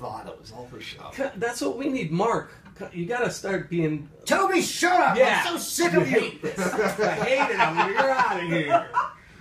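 Nothing in this one trips an alarm; there's not a single technical fault to point to anywhere in the audio.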